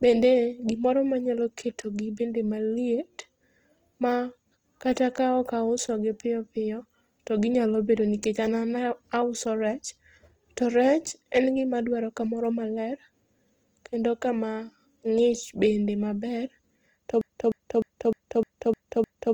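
Speech, and the whole clip has that grainy, rough texture you get from Opus compression working hard. It's likely coming from Opus in its music mode at a low rate, something around 24 kbps. The full bandwidth is kept, reaching about 20.2 kHz, but the band filling plainly smears the detail into noise. Then there's a broken-record loop from 17.21 s to the end: a 0.30 s fragment repeats back to back about seven times. That's likely a stalled player or stream resending its last chunk, so the audio that should have played there is gone.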